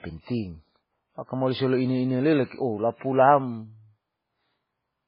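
Throughout the speech, nothing reaches above 5.2 kHz, and the sound is watery and swirly, with metallic chirps on s sounds and smeared attacks. The likely cause is heavy MP3 compression at a bitrate near 16 kbps, where weak frequency lines flicker between frames.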